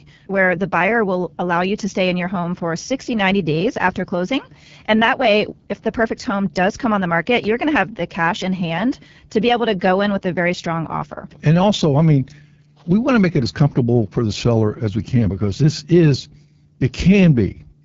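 The whole recording carries the AMR wideband (HD Voice) codec. Speech sounds rough and raspy, and nothing sits above 7.5 kHz. This points to a low rate, near 8.85 kbit/s.

At 7.43 to 7.45 s, after "come on the market" and before "you're going to have", chunks play out of order. One 10 ms piece arrives late, giving a brief jumbled moment.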